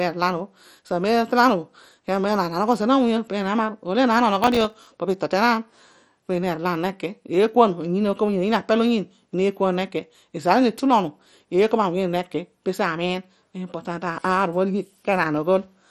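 Throughout the speech the sound is dull and gurgling, with a granular grit on every syllable. Nothing is heard above 13.2 kHz. Upper bands seem to flicker in and out. This is likely MP2 compression, applied heavily. Layer II divides the signal into 32 sub-bands and rations bits among them. Starved of bits, it drops the top bands and quantises the rest coarsely. The damage fits a rate near 56 kbps.

From 4.44 to 4.87 s a burst of processor overload crackle tears across the speech. The processor fell behind and missed a run of buffer deadlines in a row. Each buffer lasted only a few milliseconds, and something over a dozen were missed. Every miss became a brief hard-edged gap of silence. Strung together, the gaps make a gritty crackle that rides on the sound. It stops once the load eases.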